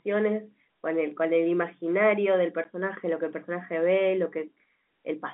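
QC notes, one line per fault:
2.64 s, packet loss filled with silence: a 10 ms dropout with a hard edge, which fits one lost packet replaced by silence.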